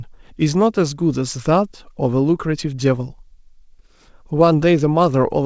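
No technical faults can be heard in the speech, which has come through a call path whose band stops at about 8 kHz, consistent with a wideband codec such as G.722.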